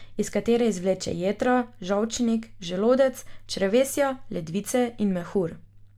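No technical faults are audible.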